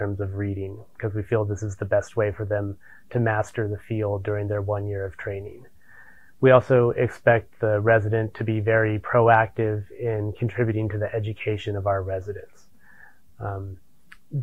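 No technical faults can be heard anywhere in this audio; the signal stays steady and intact throughout.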